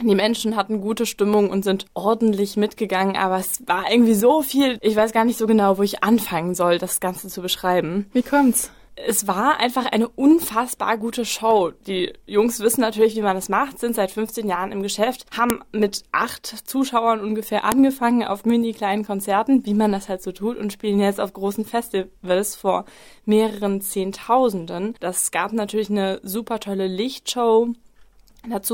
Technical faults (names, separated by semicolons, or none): file header played as audio